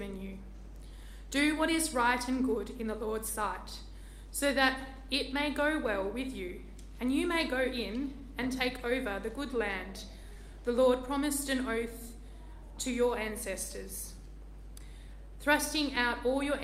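Clock drift between sender and receiver runs through the whole recording: the sending side's clock is slower than the receiver's by something like one and a half percent, so the receiver's buffer keeps running short and has to be refilled. Repeated timing corrections are what that drift sounds like, from 0.12 s to 16.6 s. The receiver keeps repeating small slices of audio to stretch the stream, playing it back at 99% of its pace and adding roughly a fifth of a second overall. Because each insertion is tiny and they fall at uneven intervals, the result is a faint unsteadiness in tempo, with occasional slight hiccups rather than any obvious skip. Scattered short gaps appear between 3.54 s and 5.90 s, where about four packets arrived late or not at all. Each hole was patched by extending the preceding sound, with the longest only a few milliseconds and all of them together covering only a tiny fraction of that stretch. 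They come through as brief ticks or small smears in the sound rather than audible dropouts.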